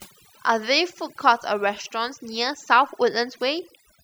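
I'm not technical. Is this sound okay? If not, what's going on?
No. Overdone noise removal: a cleanup tool set too strong erased quiet parts of the voice along with the noise, so the background breaks up into twinkling specks throughout.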